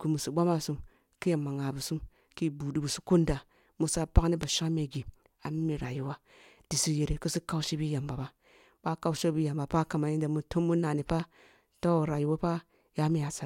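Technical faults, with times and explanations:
4.43–4.45 s and 11.10–11.22 s: loud pop. One pop comes after "musa pagni ba", then a double pop just before "toh rayuwo". Each is about 15 dB above the speech, which carries on beneath. The likely cause is a voltage spike from a plug or switch. Waveform: narrow, towering spikes. Spectrogram: thin vertical lines spanning all frequencies.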